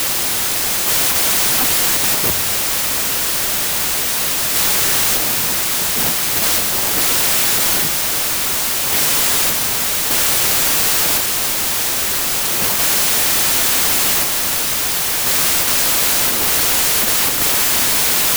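A speech recording buried in loud, harsh noise from start to finish, the voice running about 1.33 times too fast and high in pitch. It is a wrong sample width fault: audio stored as packed 24-bit integers was read as 32-bit, so samples straddle byte boundaries.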